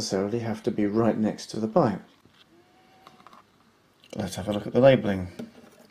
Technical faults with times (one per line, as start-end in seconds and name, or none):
1.53-1.56 repeated frames